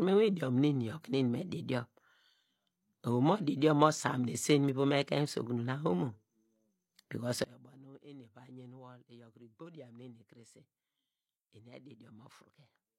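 At 7.44 s the speech and its background noise drop together by about 21 dB in a single step and stay there to the end. This sudden gain jump points to a gain change likely applied between one sample and the next without any ramp.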